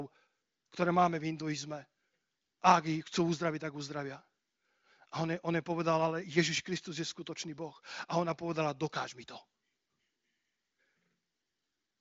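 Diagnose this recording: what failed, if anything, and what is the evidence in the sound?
Nothing failed: the speech shows the band limit of an AMR wideband (HD Voice) link, with nothing above about 7.6 kHz, and its clarity points to one of the upper AMR-WB rates, around 23.05 kbit/s.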